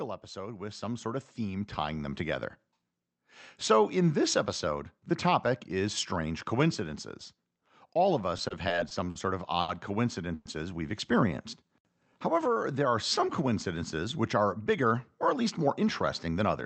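From 0.33 s to 14.21 s the level climbs steadily, speech and background swelling together by about 9 dB. This is automatic gain rising: the gain control judged the input too quiet and kept raising its gain over many seconds.

Between 8.37 s and 9.17 s the speech drags and stutters. There are five brief holds, the longest 50 ms, filling about 120 ms and roughly 15 percent of that span. These repeated stalls (stutter) happen because packets kept arriving late, emptying the jitter buffer each time. The receiver extended the last sound until it could resume, so nothing is lost.

From 9.61 s to 9.70 s one sound is held too long, with a slight buzz or dip, for about 70 ms before the speech carries on from the same point. It is a short stall from a late packet: the buffer ran dry and the receiver stretched the previous audio while it waited.

At 10.34 s to 10.47 s the sound freezes into a fading buzz or hiss for about 110 ms, never reaching silence, then resumes where it stopped. 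This call audio freeze likely comes from packets held up in transit, leaving the jitter buffer empty.

At 11.28 s to 11.82 s and again at 12.34 s to 12.80 s the speech runs slower at unchanged pitch, at 95 and then 92 percent speed, with drawn-out sounds. This is jitter buffer slow-down: the receiver repeated single pitch periods to rebuild its reserve, adding 36 ms and 45 ms.

From 14.70 s to 15.82 s the speech sounds slightly hurried at the same pitch, running at 106 percent. In this jitter buffer speed-up the receiver trimmed short pitch-period pieces, about 70 ms in all, to shed excess buffered delay. Throughout, the Opus call path limits the audio to an 8 kHz bandwidth.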